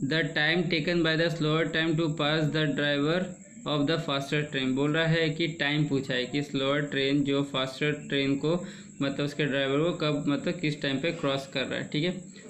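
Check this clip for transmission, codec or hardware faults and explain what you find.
Nothing audible points to a transmission, codec or hardware problem anywhere in the clip.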